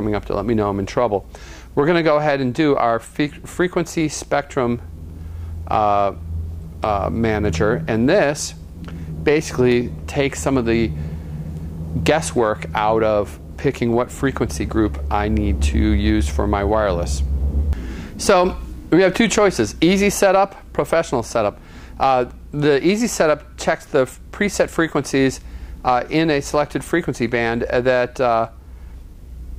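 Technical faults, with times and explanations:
Nothing stood out on listening.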